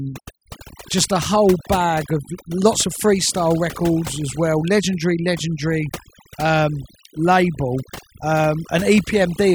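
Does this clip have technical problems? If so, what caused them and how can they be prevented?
Yes. Overdone noise removal runs through the whole speech clip. The reduction was set too strong. Frequency bands near the estimated noise floor get pulled down hard, and quieter parts of the speech vanish with them. Pauses drop and break up into twinkling specks. To prevent this, use a gentler reduction amount, or record with less background noise so less correction is needed.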